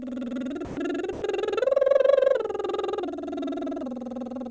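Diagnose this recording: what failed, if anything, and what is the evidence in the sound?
The failure sits in call processing. The music drops out twice, from 0.65 to 0.77 s (120 ms) and from 1.13 to 1.22 s (90 ms). Each time it gives way to a flat, steady noise bed, then returns. This is likely sound dropped by the voice detector. The sender judged the music to be background and stopped sending, and the receiver filled the gaps with comfort noise. The call codec's band limit, nothing above 8 kHz, stays the same throughout.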